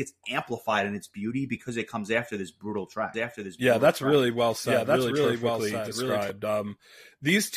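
From 3.14 to 6.3 s, just after "comes after this brutal", the speech is likely mixed in twice, by a slower second capture path or an out-of-step edit. This doubled audio track trails about a second behind, about 5 dB quieter, dry, and starts and stops abruptly.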